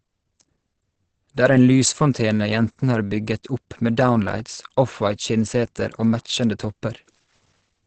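From start to finish the speech has plainly audible Opus compression, likely its speech mode at around 16 kbps: muffled, hoarse, nothing above 8.7 kHz.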